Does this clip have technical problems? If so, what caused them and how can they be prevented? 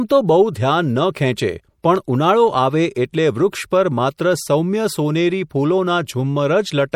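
Yes. Throughout the speech there is plainly audible MP3 compression, with a watery, swirling quality and smeared attacks. This is likely from encoding at a low bitrate, consistent with about 64 kbps, where weak frequency lines are dropped and flicker between frames. Nothing remains above 19.8 kHz. Unlike a simple low-pass filter, the damage shifts from moment to moment rather than just dulling the top. Encoding at a higher bitrate, or keeping a lossless copy, prevents it.

A single loud pop occurs from 1.96 to 1.98 s, about 5 dB above the speech, with the speech continuing underneath rather than cutting out as it would in a dropout. It is likely a sudden voltage step or pulse from a plug, switch, static discharge or driver glitch, shaped by the circuits that follow. Securing connections, avoiding switching during recording and keeping drivers stable prevents it.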